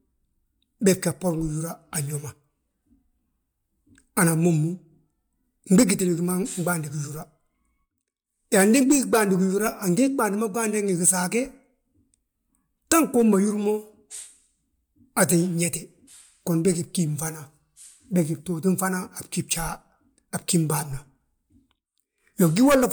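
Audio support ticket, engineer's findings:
Speech reviewed; no audible faults found. No action needed.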